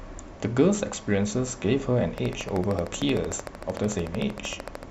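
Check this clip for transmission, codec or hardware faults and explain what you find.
A train of clicks runs from 2.18 s to 4.84 s: about forty pulses at a regular 13.2 per second, likely from interference or a struggling interface, ticking through speech and pauses at roughly 10 dB above it. Spectrograms show evenly spaced vertical broadband lines; waveforms show sharp repeated spikes.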